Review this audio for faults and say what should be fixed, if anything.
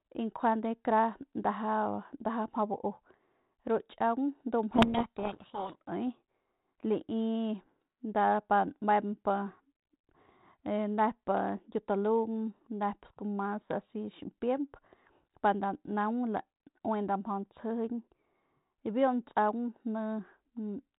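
From 4.72 to 5.77 s the speech is buried in harsh, rasping distortion. This is a codec payload misread: the 32 kbit/s G.726 code words arrive in the wrong bit order, so the decoder applies incorrect prediction steps. A spectrogram shows dense broadband energy filling everything below 4 kHz, and the waveform turns jagged and noise-like. To prevent it, both ends should agree on the G.726 bit packing order when the call is set up.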